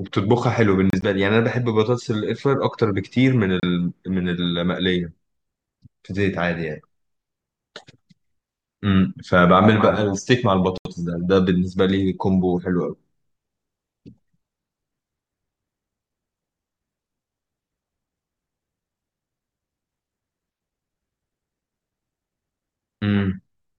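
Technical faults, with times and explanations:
0.90–1.04 s, Bluetooth dropout: about 46 ms of sound vanishes in two holes spread over roughly 120 ms, the longest about 30 ms. This is likely packets arriving at the headphones too late and being discarded, so output goes silent.
3.60–3.65 s, Bluetooth dropout: 30 ms of silence, likely from missing packets.
10.78–10.88 s, Bluetooth dropout: the longest loss, about 76 ms. Sound resumes further along, as though it had played on through the silence.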